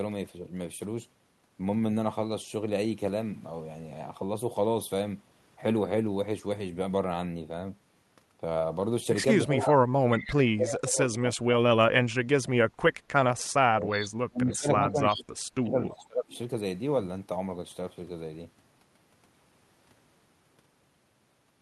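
At 9.45 to 9.77 s, both ends appear to talk at once. The likely cause is an echo canceller that cannot tell its own talker from the far-end echo, so it turns everything down. This speech suppressed in double talk shows up as a short dip of roughly 15 dB.

From 9.62 to 11.16 s, echo leak is likely: a loudspeaker end's canceller lets some of its microphone pickup through. A delayed copy of the voice returns 316 ms late, about 10 dB under the direct speech.

From 10.3 to 12.56 s, the suppression is likely back and much harder. About 1.5 s of speech drops by as much as about 35 dB.

From 13.53 to 16.34 s, a likely further double-talk clash holds the voice down by up to about 30 dB across roughly 2 s.

Inside that span, from 14.01 to 15.23 s, the echo is likely leaking again. It returns at the same 316 ms delay, about 15 dB down.

The last leak runs from 15.89 to 16.38 s at 316 ms, about 25 dB down, and is likely the same leaking canceller. 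It is a faint trace.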